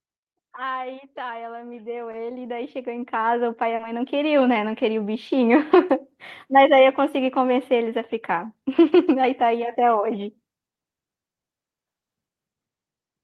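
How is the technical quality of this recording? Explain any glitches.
The recording has two glitches, both early and overlapping, heard through a call path whose treble stops at about 12 kHz.

From 1.14 to 4.09 s there is automatic gain rising. The gain control judged the incoming level too low and pushed its amplification up step by step, by about 14 dB in total. Because the boost applies to everything, the voice and the room noise behind it swell together over roughly three seconds, so the speech seems to creep closer and the background grows.

At 3.75 to 3.82 s, near the end of that swell, there is a short concealed packet loss. About 40 ms of audio arrived too late for the decoder, and the receiver covered the gap by extending the preceding sound, then crossfading back to the real signal. In this clip it comes across as a brief smear or wobble in the speech, lasting a few hundredths of a second, rather than an outright dropout.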